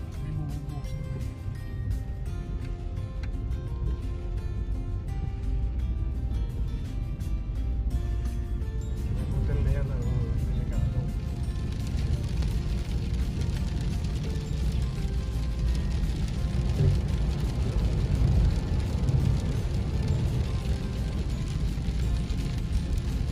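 At 12.43 s a loud pop is heard, two sharp pulses in quick succession that finish by 12.69 s and stand roughly 10 dB above the surrounding sound, which continues underneath without interruption. The likely cause is a sudden voltage step or spike entering the signal chain, from a connector being plugged, a switch, a static discharge or a driver glitch. The downstream circuitry shapes each pulse into a short thump.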